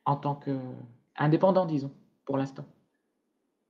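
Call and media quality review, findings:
Nothing stood out on listening to the speech, which carries the usual band-limited character of an Opus call path at about 12 kHz.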